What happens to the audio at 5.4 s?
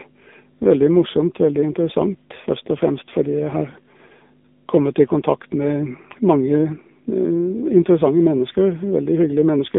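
Mains hum runs through 5.4 s and the whole clip: a ground loop or nearby transformer leaks the 50 Hz power line into the signal, leaving a steady low drone with some low harmonics, sitting roughly 20 dB below the speech.

The AMR narrowband mobile codec also shapes 5.4 s and every other moment. The speech has been squeezed into an 8 kHz phone channel, passing roughly 200 Hz to 3.7 kHz with nothing above 3.8 kHz. The heavy buzzy, synthetic quality fits a low AMR-NB mode near 6.7 kbps, where each frame gets only a few excitation pulses.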